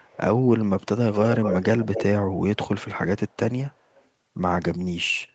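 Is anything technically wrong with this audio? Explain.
Yes. There is echo leak at 0.02–0.18 s, 1.13–1.63 s, 1.81–2.04 s and 3.75–4.05 s. A delayed copy of the speech trails it by about 0.24 s (0.29 s in the first). It is nearly as loud as the speech in the middle two and faint in the others. Likely a far-end echo canceller let loudspeaker pickup through.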